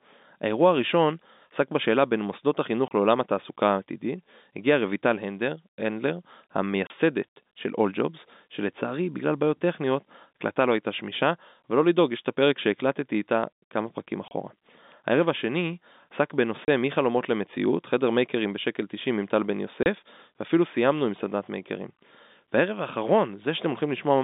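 At 2.88, 6.87, 14.28, 16.65 and 19.83 s the speech drops into 30 ms holes of dead silence, packet loss filled with silence: each single lost packet leaves hard edges rather than the smeared repeat of concealment. The telephone-band G.711 coding underneath stays faint.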